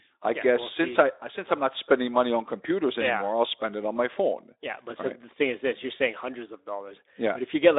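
Nothing stood out as a technical fault on listening to this speech recording.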